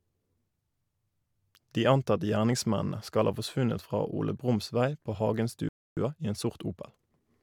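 Speech runs normally until 5.69 s, when the sound drops out for about 282 ms, a playback stall that likely came from the player running out of buffered data or its output thread being held up. From 5.97 s to 7.35 s the speech sounds hurried at unchanged pitch, running about 1.15 times normal speed: time-compressed catch-up, where small pieces are trimmed and cross-faded to work off the backlog left by the stall.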